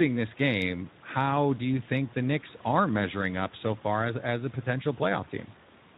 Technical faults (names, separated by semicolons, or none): Speex codec